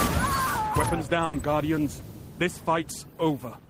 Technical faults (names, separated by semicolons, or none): burst of packet loss; short concealed packet loss